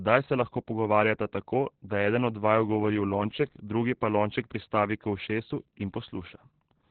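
The speech is damaged from start to finish by Opus voice compression at a very low rate. Nothing remains above about 4.4 kHz, so the sound is narrowband, muffled and dull. The coder is running its SILK linear-prediction mode and spending very few bits on the excitation. That leaves the voice hoarse and faintly robotic. The damage is heavy, which fits a bitrate near 8 kbps.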